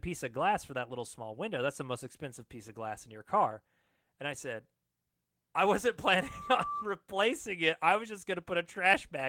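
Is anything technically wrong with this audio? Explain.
Yes. From 6.17 to 6.87 s there is loudspeaker feedback squeal. The microphone re-amplifies its own loudspeaker, so a 1.2 kHz tone swells over about half a second, unlike a steady interfering tone.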